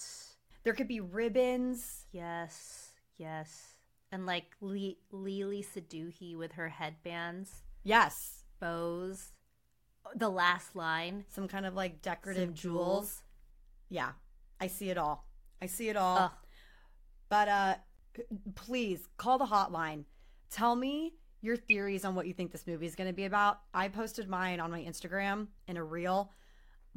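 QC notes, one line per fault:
21.70–21.72 s, damaged data in a compressed stream: a 22 ms glitch after "me your", before "on what you think", where corrupted frames made the decoder lose sync.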